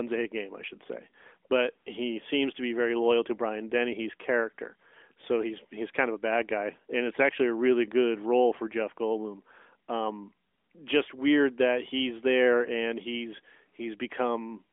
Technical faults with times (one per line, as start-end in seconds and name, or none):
none